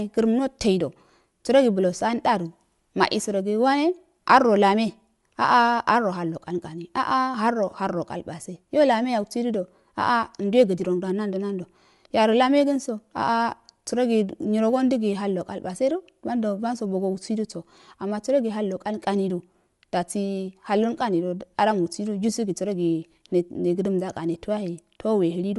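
Likely Bluetooth LC3 compression throughout strips everything above 11.5 kHz, leaving the speech dull on top, with a plainly audible grainy, breathy edge.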